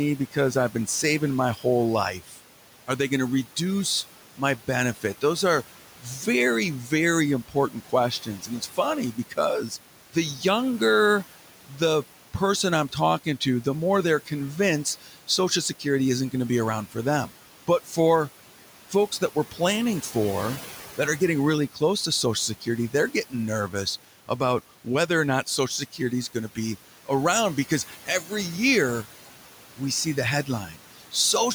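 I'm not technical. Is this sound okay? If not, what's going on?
No. The background noise dips when nobody talks and swells back under the speech. These are noise suppressor artifacts: a filter keeps turning down whatever it judges to be steady room noise.

In places, quiet parts of the speech also drop away and sound swallowed. This is speech cut by the noise suppressor, which mistook them for background. It happens between 0.18 and 2.4 seconds, 4.37 and 10.41, 11.67 and 17.9, 18.9 and 20.15, and 21.2 and 31.14, adding up to less than a second within each stretch. The room's own background sound sits well below the speech.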